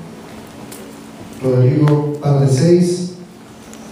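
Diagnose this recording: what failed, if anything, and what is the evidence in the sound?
Nothing in the signal chain has failed: the level holds steady, the waveform stays continuous with no gaps, clicks or clipped peaks, and timing and pitch are stable throughout.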